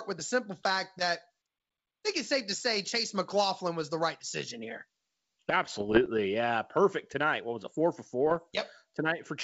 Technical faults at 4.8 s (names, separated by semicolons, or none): none